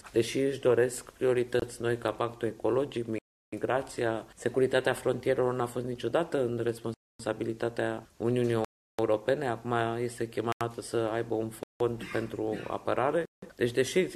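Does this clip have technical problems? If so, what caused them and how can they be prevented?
Yes. The sound cuts abruptly to dead silence at 1.60 s (a short hole of about 27 ms), 3.18–3.53, 6.94–7.20, 8.65–8.99, 10.52–10.61, 11.63–11.80 and 13.25–13.42 s. These are blocks of digital silence: whole output buffers, often multiples of 4096 samples, were left as zeros when the program failed to fill them in time. Larger buffers and a higher-priority audio thread would prevent it.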